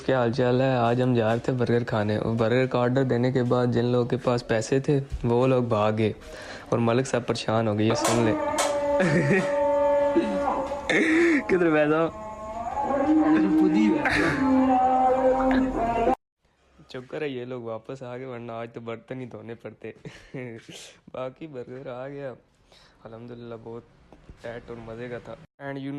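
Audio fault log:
14.96–17.01 s, call bitrate drop: the bandwidth estimate fell and the encoder coarsened its coding, which fits a drop from 64 to about 25 kbps. High frequencies above 12 kHz vanish and the sound turns rougher and more muffled for roughly two seconds, until the rate recovers.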